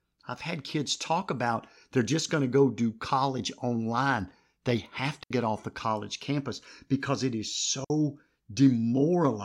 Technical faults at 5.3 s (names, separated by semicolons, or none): digital wireless dropout